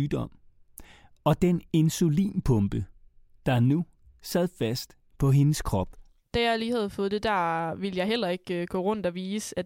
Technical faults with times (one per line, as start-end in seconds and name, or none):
3.79 dropped samples